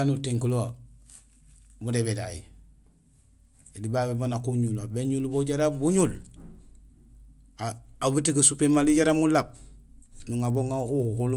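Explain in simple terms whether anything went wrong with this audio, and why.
Something did go wrong: the speech carries a faint, steady ticking all the way through, about 20 ticks per second, which goes quiet in the pauses. This is a resampler restarted on every block. The audio was converted to a new sample rate, which fits a change from 24 kHz to 48 kHz, in 50 ms pieces, each handled alone. Every piece's edge comes out slightly wrong, and those repeated edge errors are the ticks.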